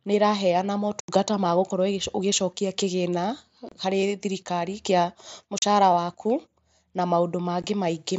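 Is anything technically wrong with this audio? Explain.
Yes, there's unconcealed Bluetooth headset packet loss: four short holes in the speech, at 1.0 to 1.09 s (right after "nĩ ĩraheana", about 82.5 ms), 3.69 to 3.72 s (between "ũgĩcokia kĩgĩna" and "harĩ thirikari kĩa"), 5.58 to 5.63 s (after "kĩgĩna harĩ thirikari kĩa"), and a brief one at 7.62 s. Packets between headset and phone never arrived and nothing filled the gaps, so the sound cuts out with hard edges. The gap lengths fit runs of 7.5 ms packets over the mSBC link.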